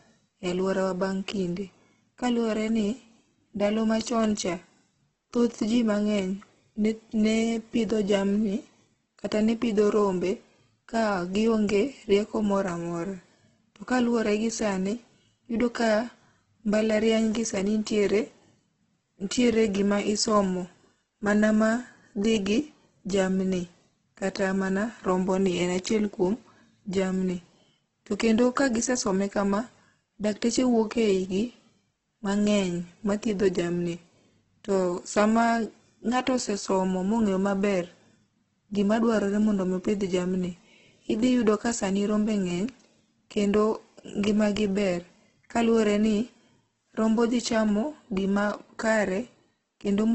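Throughout the speech, the sound is rough and grainy, with a noisy texture in place of clean detail and nothing above 8.2 kHz. The cause is likely heavy Opus compression in its music (CELT) mode, filling starved bands with noise, which fits a rate near 12 kbps.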